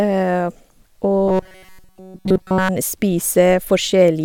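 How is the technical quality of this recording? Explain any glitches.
The recording has one clear glitch: robotic sound from repeated short buffers, from 1.28 to 2.69 s. Throughout that stretch the speech becomes a rigid, metallic buzz at 188 Hz that still roughly tracks the words. Essentially all of it is recycled audio. The likely cause is new audio arriving too slowly, so playback loops a buffer of roughly 5.3 ms and skips the real signal. Unlike ordinary dropouts or stutter, the repeats impose a buzz at a fixed rate.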